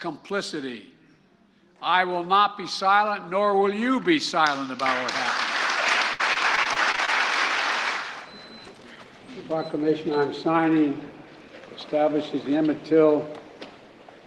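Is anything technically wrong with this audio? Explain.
Yes. Repeated packet loss (robotic sound) runs from 6.13 to 7.09 s. Packets kept going missing, and each gap, none longer than about 58 ms, was patched by stretching the preceding sound. Roughly a fifth of that stretch is filler, so the audio turns choppy, with pieces missing.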